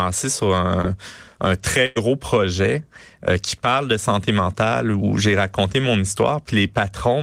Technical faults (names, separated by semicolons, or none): short concealed packet loss; burst of packet loss